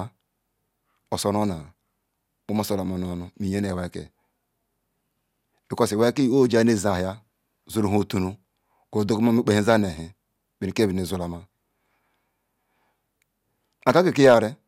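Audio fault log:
No fault to log.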